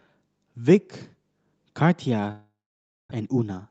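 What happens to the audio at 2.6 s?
A long network dropout runs from 2.31 to 3.13 s. Packets likely stopped arriving. The last sound fades into silence, and 0.6 s of speech never returns.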